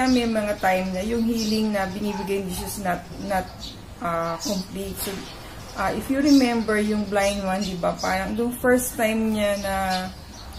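No technical faults can be heard anywhere in the clip.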